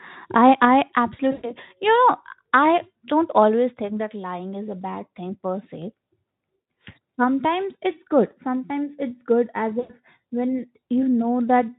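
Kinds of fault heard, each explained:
VoIP packet loss concealed by the speech codec: when packets go missing, the decoder keeps extending its last pitch and spectral shape at falling gain, so speech smears into a buzzy, fading tone. It happens just after "I I" at 1.31 to 1.53 s, at 6.56 s, and after "it's good as" at 9.79 to 9.91 s, each gap fitting about 100 to 120 ms of lost audio. A spectrogram shows frozen, repeating harmonics fading out, and the waveform shows a decaying envelope.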